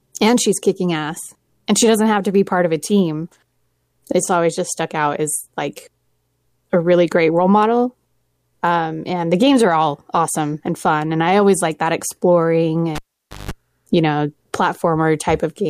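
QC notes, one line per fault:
12.95–13.51 s, cable pulled and plugged in: the live lead is yanked and reinserted, so contact breaks with a pop, leaving about half a second of near silence, then a 0.17 s burst of 50 Hz mains buzz while only the plug tip touches, and a second pop as the speech returns.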